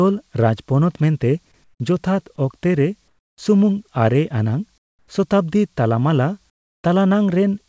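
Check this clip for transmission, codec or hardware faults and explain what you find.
One kind of fault appears: comfort noise in place of the background, in four pauses in the speech at 1.64–1.80 s, 3.08–3.38 s, 4.78–5.08 s and 6.50–6.84 s. In each gap, the room tone turns into a flat, featureless hiss that is about 9, 13, 15 and 17 dB quieter. This is likely discontinuous transmission, where the sender stops sending during silence and the receiver fills the gap with synthetic noise. The lack of content above 8 kHz suggests a wideband call codec on the path.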